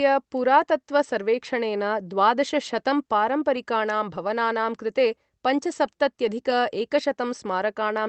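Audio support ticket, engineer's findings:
No faults found in the speech; the call path's bandwidth tops out near 8 kHz, which fits an Opus call codec.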